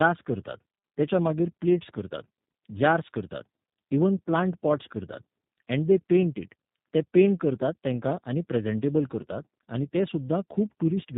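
Throughout the speech there is tandem speech coding. The sound fits two low-rate speech codecs in a row, such as iLBC then G.729A. The second re-codes the first's damaged output. Nothing remains above 3.8 kHz. Speech sounds rough, muffled and warbly.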